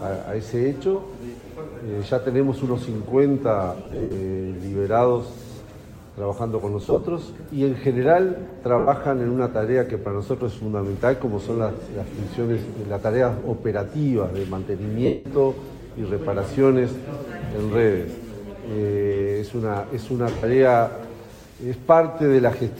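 Brief noisy smears replace the sound at 3.84–4.15, 6.81–7.03, 8.79–8.88, 15.06–15.25 and 20.37–20.43 s: lost LE Audio frames, concealed by a decoder replaying the last spectrum with scrambled phase.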